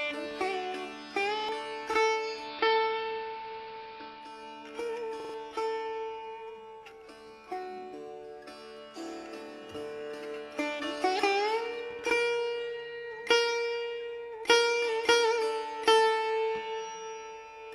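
At 1.39 s there's a quick stutter: a repeated buffer. Fresh audio didn't arrive in time, so the player looped its last block, a piece about 46 ms long, which fits a 2048-sample buffer. You hear it sound three times in all, with a hard join at each repeat, and roughly a tenth of a second of real audio is lost.

From 2.13 to 4.45 s the digital radio blends to analogue, here the AM broadcast of the same station. The crossfade takes 376 ms each way. The level dips about 2 dB, and hiss comes up to around 20 dB below the signal.

The same repeated buffer hits again at 5.20 s, once more a roughly 46 ms block. This time it plays four times, making a longer stutter, and about 150 ms of audio goes missing.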